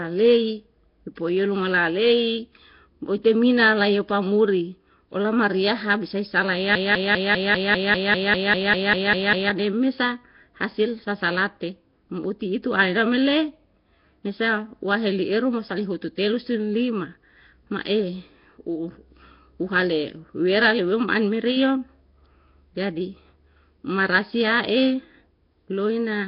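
From start to finish the speech has a rough, hissy halo and a smeared, underwater tone. Nothing is heard above 5.3 kHz. This is likely Nellymoser compression, the old Flash microphone codec. It codes short blocks with a fixed, tiny bit budget. Weak bands get no bits and are filled with noise instead. The damage here is heavy, which fits a low rate of around 22 kbps.

At 6.75 s the sound locks into a broken-record loop. A fragment of about 0.2 s repeats exactly, back to back, about fourteen times, until 9.50 s. The stream likely stalled and kept resending the last piece it held. Whatever should have played in those nearly three seconds is gone. The result is a stuttering, mechanical repetition.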